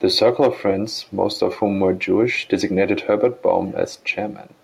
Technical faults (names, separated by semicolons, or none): echo leak